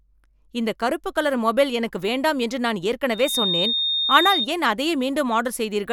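Loudspeaker feedback squeal runs from 3.11 to 4.47 s, starting just after "எனக்கு வேண்டாம் என்று நான்". The microphone is hearing the loudspeaker it drives, and at about 3.7 kHz the gain around that loop exceeds one, so that frequency reinforces itself on every pass. It swells over roughly a third of a second into a piercing whistle that sits a few decibels above the speech.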